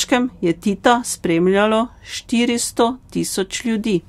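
No technical faults can be heard anywhere in the recording, and the speech signal stays steady and intact throughout.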